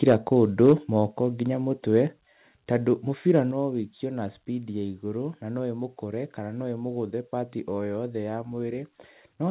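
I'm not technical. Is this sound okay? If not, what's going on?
No, it isn't quite okay. There are two problems.

The first is microphone overload. At 0.03 to 0.14 seconds and again at 0.61 to 0.73 seconds, the loudest moments sound harsh and crackly. The sound went past the loudest level the recording could hold, so the tops of those peaks were sliced off. The likely cause is a microphone volume set too high at the start.

The second is the microphone volume stepped down. The whole sound suddenly gets a little quieter at 0.12, 1.11, 2.13 and 3.51 seconds. The 1.11 drop comes just before "nginya mũtwe", and the 2.13 drop comes just after it. This is likely the call software noticing the sound was too loud and turning the microphone down in small jumps. It isn't a smooth fade.

The sound also has the narrow, phone-like quality of an ordinary call line, which is normal for this kind of connection.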